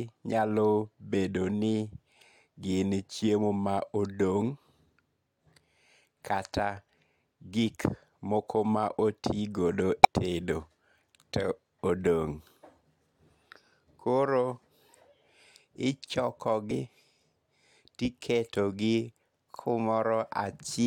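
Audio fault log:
10.03–10.06 s and 16.70 s: damaged data in a compressed stream. Each is a short blip in the speech, the first right after "ma otigodo" and lasting about 22 ms, the second briefly at 16.70 s. Some bytes in the compressed stream were wrong at these points. The decoder misread the affected frames and lost sync. It then searched for the next valid frame header. That misreading and recovery produces the brief glitch.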